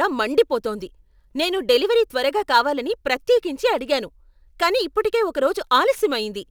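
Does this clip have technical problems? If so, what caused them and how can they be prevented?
Yes. Sample clock jitter runs through the whole speech clip: a fine hiss and roughness that swells on loud, bright passages and drops away in the pauses. The converter's clock wanders by something like a few microseconds, so each sample lands slightly off time, and the resulting error scales with how steeply the waveform is changing, sitting very roughly 35 dB below the signal. Preventing it means clocking the converter from a stable, low-jitter source with clean power and proper clock distribution.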